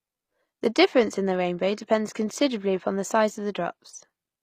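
From the start the whole clip carries the sound of HE-AAC compression, most likely at around 24 kbps, and the codec damage is plainly audible. The upper spectrum is rebuilt from copied lower bands under a coarse envelope, so its harmonics do not line up with those beneath, and s sounds come out gritty or lispy. On a spectrogram nothing appears above 14.9 kHz, and the replicated treble looks blocky and repetitive rather than continuous.

At 0.67 s a channel delay (comb filtering) begins and lasts to the end at 4.42 s. One channel arrives roughly two samples late, about 0.05 ms, and when the two are summed to mono, content common to both cancels at evenly spaced frequencies. With a delay this short the first notch sits near 10 kHz, so the effect is a dulled top end. A spectrogram shows a dark notch band around 10 kHz from 0.67 s onward.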